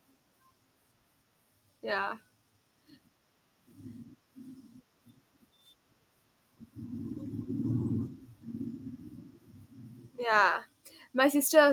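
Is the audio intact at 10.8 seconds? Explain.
Yes, at 10.8 seconds the speech plays through intact, with no dropout, click, distortion or other fault to be heard.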